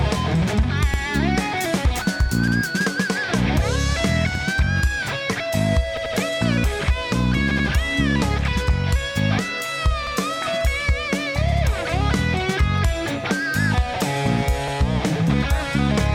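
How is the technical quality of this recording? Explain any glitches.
The recording is marred by repeated buffer glitches, eight in all. They occur at 0.94, 2.48, 4.35, 5.97, 7.51, 10.07, 11.52 and 14.68 s. Each time, the playback device ran short of fresh audio and replayed its last block. That block lasts about 85 ms, which fits a 4096-sample buffer. The same slice is heard again with a hard join, giving a brief stutter. At 5.97 and 7.51 s it repeats twice. No audio seems lost.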